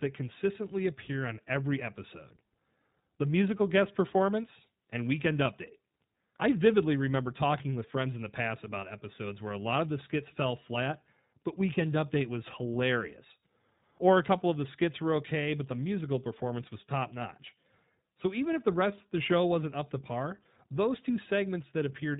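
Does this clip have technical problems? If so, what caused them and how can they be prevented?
Yes. Throughout the speech, iLBC codec damage is plainly audible. Nothing above 4 kHz survives, and each frame's excitation is coded independently, leaving a rough, slightly synthetic texture that fits 20 ms frames at 15.2 kbps. Unlike a simple band-limit, roughness also colours the remaining band. Prevent it by sending or storing the audio with a wideband codec at a higher bitrate.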